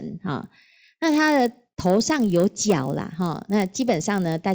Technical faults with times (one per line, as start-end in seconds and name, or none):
0.42-4.54 resampler restarted on every block